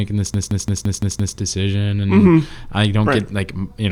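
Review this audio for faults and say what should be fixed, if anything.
From 0.34 s to 1.37 s the speech breaks into a rapid machine-gun stutter: one 171 ms fragment repeats exactly six times, about 5.9 times per second. This is a system hang loop. The computer or audio driver stalled and stopped supplying new samples, while the sound hardware kept replaying the same stale ring buffer. The loop length fits an 8192-sample buffer, and little or no audio seems to be lost once playback resumes. To prevent it, give the audio thread real-time priority and have the driver mute the output on underrun.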